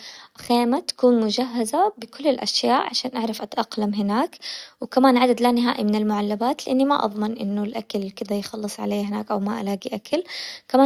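Clock slip clicks run from 0.13 s to 10.82 s: roughly every 70 ms a single sample is dropped or repeated, likely because two unsynchronised device clocks drift apart by a few hundred parts per million. The hundreds of ticks form a soft rattle, clearest on loud speech.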